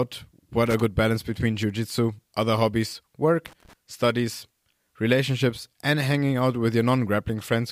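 Speech, interrupted twice by loose connector crackle. The first burst runs from 0.66 to 0.81 s. The second runs from 3.46 to 3.73 s. Each is an irregular scratch. A worn contact is making and breaking, chopping the signal.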